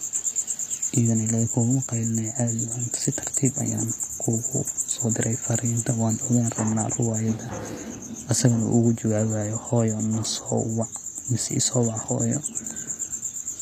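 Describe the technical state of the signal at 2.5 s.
At 2.5 s the speech carries HE-AAC compression artefacts, present throughout and likely from a low-rate encode near 24 kbps. The treble is rebuilt by copying lower bands upward, so sibilants sound gritty and metallic. A spectrogram shows smeared, blocky upper bands and nothing above 14.9 kHz.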